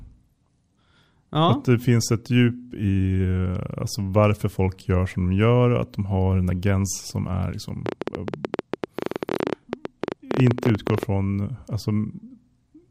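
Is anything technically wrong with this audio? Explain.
Yes. From 7.86 to 11.04 s a train of clicks runs over the speech: around fifty sharp ticks, about 15.5 per second at uneven spacing, peaking well above the speech level. It is likely interference injecting pulses, visible as thin vertical broadband lines on a spectrogram and narrow spikes in the waveform.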